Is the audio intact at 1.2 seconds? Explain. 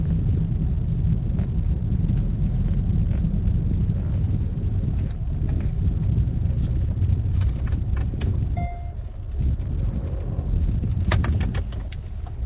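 Yes, the audio is intact at 1.2 seconds, carrying only the narrow band-limiting of the call path, with nothing above 4 kHz.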